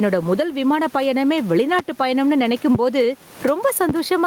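Speech throughout, with gain pumping across the whole clip: the gain drops on loud syllables and recovers between them, a level swing of around 10 dB. Unlike steady room noise, which sits about 31 dB below the speech, this breathing rises and falls with the talker, likely from gain set far too high and a fast limiter clamping it. Three loud pops land at 1.79 to 1.82 s, 2.75 to 2.78 s and 3.89 to 3.92 s, each a single sharp thump roughly 15 dB above the speech. The speech carries on underneath each one, which separates them from a dropout or an edit. Each pop is likely a voltage spike from a plug, switch, static or driver glitch.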